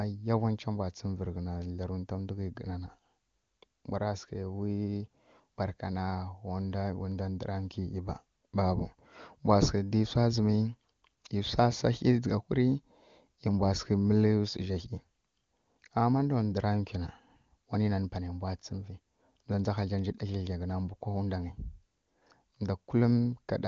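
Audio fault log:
No fault in this speech clip, which is carried over the AMR wideband (HD Voice) codec at a high rate.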